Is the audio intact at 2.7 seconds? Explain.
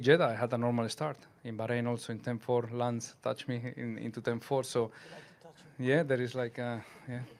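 Yes, the audio is intact at 2.7 seconds, with no dropout, click, distortion or other fault audible at that moment.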